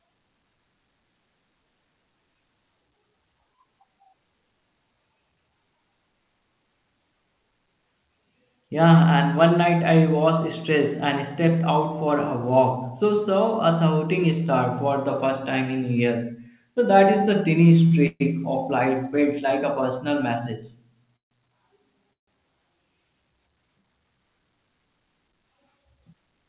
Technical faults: short stall from a late packet; call audio freeze; jitter buffer speed-up

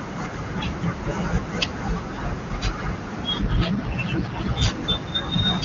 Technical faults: AMR rate drop

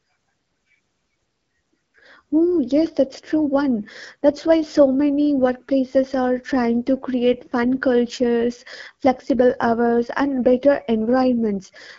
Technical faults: AMR wideband (HD Voice) codec

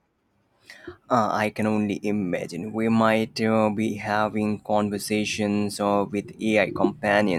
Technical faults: none

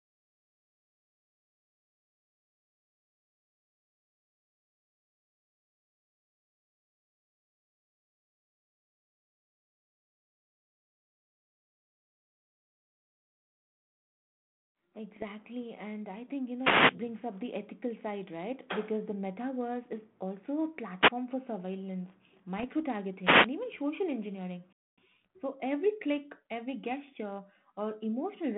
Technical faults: bit errors on an ADPCM link; wireless microphone noise hit; gap between chunks

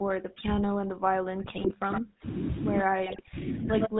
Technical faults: GSM full-rate codec; speech suppressed in double talk; GSM bit errors; echo leak

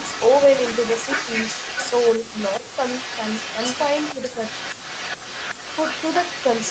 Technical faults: echo leak; speech suppressed in double talk

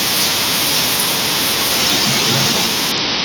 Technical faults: audio missing between chunks; Bluetooth SBC bit pool drop

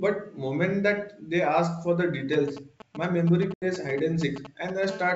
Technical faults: GSM signalling bursts; packet loss on an ADPCM call; GSM phone buzz

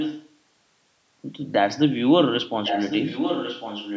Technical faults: echo leak

